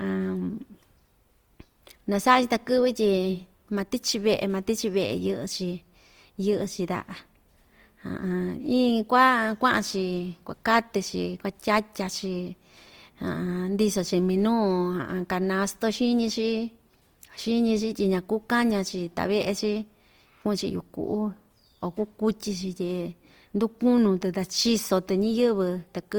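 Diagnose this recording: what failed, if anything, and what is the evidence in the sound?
Throughout, the speech sounds grainy and rough, with noisy highs up to 20.2 kHz: codec stage, likely Opus compression filling starved bands with noise.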